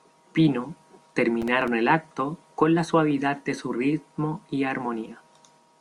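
A gritty burst of crackle tears through the speech from 1.42 to 1.68 s, just before "el acto con la": processor overload crackle, where several very short buffers, roughly 1.5 ms each, miss their deadlines and drop to silence.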